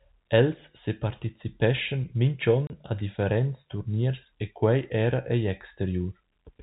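At 2.67 s there's packet loss filled with silence: a 30 ms hole, which fits one dropped packet, cutting the speech with hard edges, over the band-limited telephone sound.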